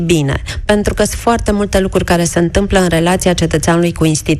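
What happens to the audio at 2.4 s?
MP2 compression damage at 2.4 s, as throughout: the sound is dull, gurgling and granular, likely from a low bitrate near 80 kbps that switches upper sub-bands off and coarsely quantises the rest.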